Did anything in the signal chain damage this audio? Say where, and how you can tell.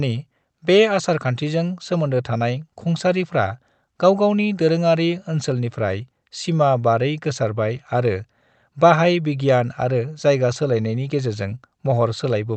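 No, nothing in the chain damaged this speech.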